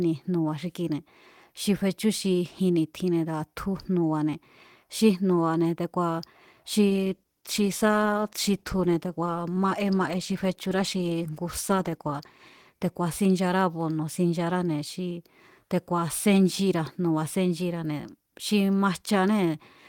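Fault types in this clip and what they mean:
call bitrate drop: the speech turns coarse and muffled, fitting an encoder starved down to roughly 15 kbps; the spectrogram's upper band goes empty.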